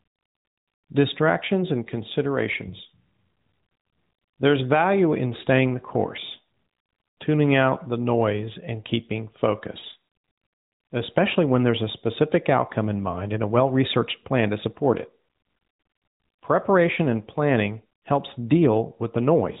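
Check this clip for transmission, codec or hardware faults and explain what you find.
No faults found.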